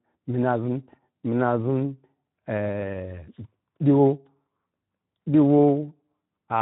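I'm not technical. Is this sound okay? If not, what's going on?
No. Throughout the clip the speech sounds rough, hoarse and noisy. That is Speex codec damage: an older internet-calling and game-chat format squeezed the voice into very little data, so the fine texture of the voice gets rebuilt only roughly.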